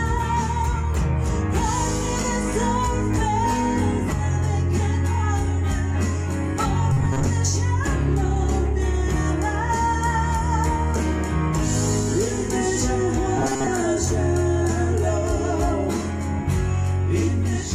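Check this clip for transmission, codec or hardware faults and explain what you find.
Two faults, both robotic sound from repeated short buffers, at 6.93–7.27 s and 13.37–13.67 s. The sound turns into a rigid metallic buzz at 134 Hz. It is likely caused by starved playback repeating a 7.5 ms chunk, covering about half, then most, of each stretch.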